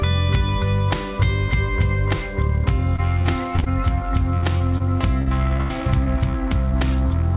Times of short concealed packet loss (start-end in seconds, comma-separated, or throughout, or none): 4.38-4.82